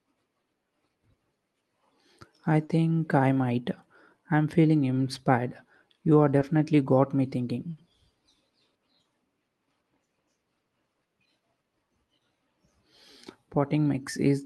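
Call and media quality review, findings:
Short concealed packet loss at 2.65–2.71 s (40 ms) and 6.39–6.43 s (20 ms): brief smear and wobble. Jitter buffer/PLC extrapolated the last sound into the gap. On a spectrogram, harmonics smeared flat across the hole; on a waveform, a repeated cycle pattern.

Burst of packet loss at 7.71–7.79 s: about 60 ms lost, then audio resumes further on with that stretch missing. Network loss spanning consecutive packets; the concealer held the last sound and faded it. Spectrogram shows a frozen, dimming band; waveform shows a decaying envelope, then an abrupt restart.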